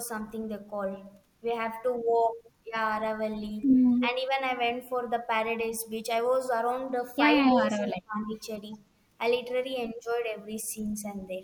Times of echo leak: 2.08-2.28

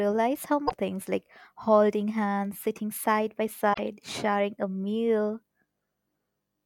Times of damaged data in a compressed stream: 0.64-0.72, 3.70-3.79

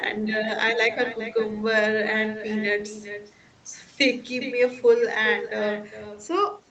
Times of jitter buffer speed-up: none

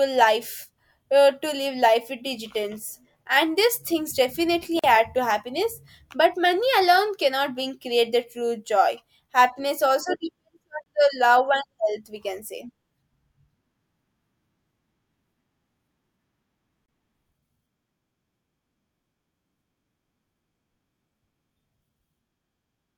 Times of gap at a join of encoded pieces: 4.79-4.84, 10.84-10.86, 16.86-16.88

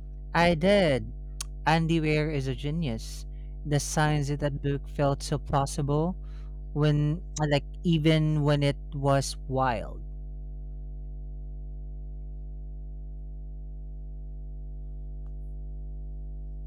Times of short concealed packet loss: none

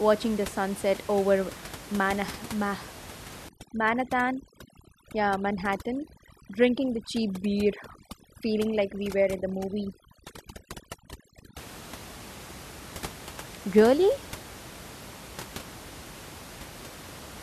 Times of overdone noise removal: 3.49-11.58

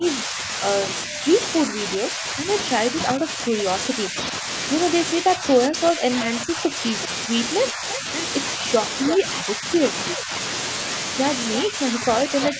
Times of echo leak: 9.09-9.14

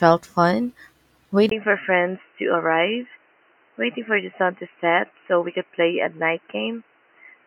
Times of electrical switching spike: none

